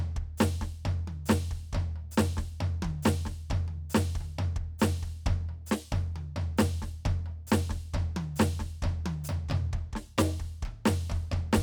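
No technical faults can be heard anywhere in the music.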